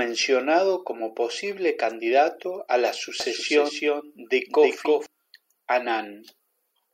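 From 3.20 to 5.06 s, just after "posible candidato a la", a doubled audio track appears: a full-band copy of the speech runs around 300 ms behind, roughly 5 dB quieter. It likely comes from a second, slower capture path. Unlike an echo, it has no decay or room colour and starts and stops abruptly.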